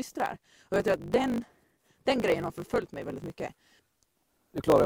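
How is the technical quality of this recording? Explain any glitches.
Not great: there's one fault, and it runs the whole way through. It's a block size mismatch, truncated. One stage writes longer blocks than the next one reads, so the tail of every block gets dropped. The chopping happens at the block rate, giving a steady 50 Hz buzz, which fits 1024-sample blocks. Because chunks keep vanishing, the audio plays 1.16 times faster than it should, yet the pitch stays about where it belongs.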